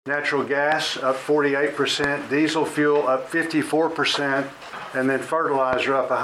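The audio carries loud pops, sharp thumps roughly 15 dB above the programme, which continues underneath: a double pop between 0.72 and 0.89 s, then single pops at 2.04–2.06 s and 5.73–5.75 s, likely voltage transients from a plug, switch or static discharge.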